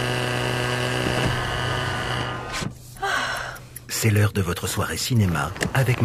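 Nothing in the signal points to a technical fault at any point in the audio.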